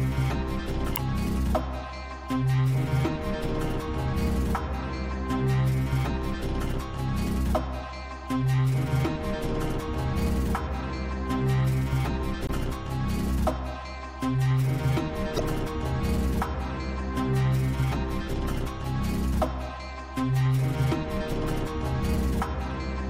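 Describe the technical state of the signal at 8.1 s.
MP3 compression damage is audible at 8.1 s and throughout: the encoder has likely cut treble and switched weak frequency lines on and off, giving a watery, swirly sound that fits about 64 kbps.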